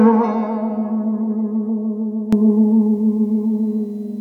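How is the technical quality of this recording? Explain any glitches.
The music has one clear fault, a sudden gain jump. At 2.33 s the level rises by about 12 dB in a single step and stays up to the end. The likely cause is a digital gain change applied without a ramp. The background noise rises with the music, which rules out a louder passage. There is no gradual swell, which rules out an automatic gain control.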